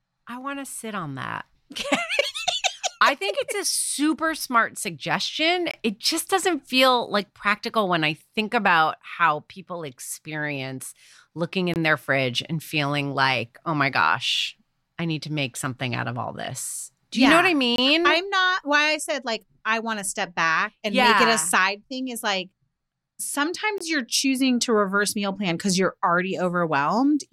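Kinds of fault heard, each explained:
Gap between chunks: the speech drops out four times into short, hard-edged silences of about 23 ms, at 5.71, 11.74, 17.76 and 23.78 s, spaced evenly about 6 s apart. The regular spacing shows the audio was handled in 6-second chunks, with a small stretch of silence inserted at each join, fitting codec padding or a late-starting player. Nothing is cut from the speech itself; it is only interrupted at each boundary.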